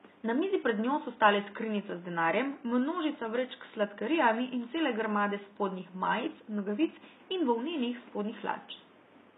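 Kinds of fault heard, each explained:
HE-AAC compression: plainly audible throughout the speech. The treble sounds rebuilt rather than recorded, and s sounds come out gritty, metallic or lispy. The likely cause is HE-AAC copying lower bands upward to recreate the top end, which fits a 16 kbps stream.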